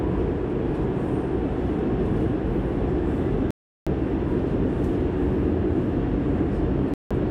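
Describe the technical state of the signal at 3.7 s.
At 3.7 s the signal is in a digital broadcast dropout from 3.51 to 3.87 s: the receiver mutes after losing frames, leaving clean silence rather than smeared or repeated sound.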